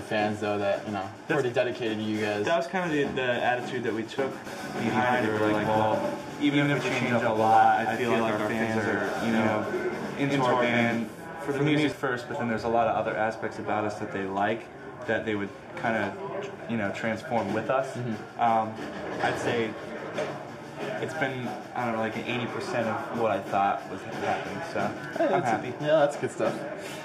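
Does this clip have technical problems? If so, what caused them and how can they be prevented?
Yes. From 4.46 s to 11.92 s the audio is doubled: every sound is followed by a second, equally loud copy roughly a tenth of a second behind, with no decay or room colour. The copy cuts in and out abruptly at those times. This is a doubled audio track, likely from the signal being captured again through a slower path and mixed back in. Monitor routing so each source reaches the mix only once.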